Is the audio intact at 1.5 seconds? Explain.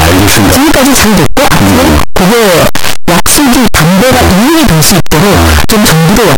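No. At 1.5 seconds the speech has very loud, harsh distortion, and quiet stretches are as loud as the rest. This runs throughout the clip. The likely cause is signed and unsigned mixed up in the 8-bit audio, flipping the top bit so each zero crossing jumps across the whole range.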